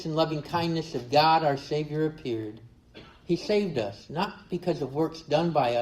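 A short piece of audio shifts to an adaptive stream at a lower bitrate from 2.75 s to the end at 5.82 s. The sound takes on more codec artefacts, consistent with a drop from roughly 64 to 24 kbit/s Opus as the connection slowed. Unlike packet loss, there is no gap or glitch. The quality switches abruptly and then holds steady, rather than degrading gradually or dulling evenly throughout.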